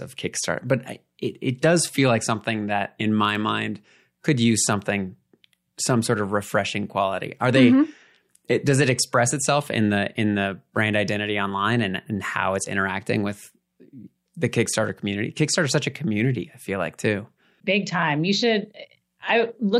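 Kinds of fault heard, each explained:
Bit error spike: a single bit flipped in a stored or transmitted sample, throwing that one value off by a power of two before the next sample returns to normal, so the speech carries two sharp broadband ticks, at 3.35 s (about -21 dBFS) and at 4.64 s (about -27 dBFS).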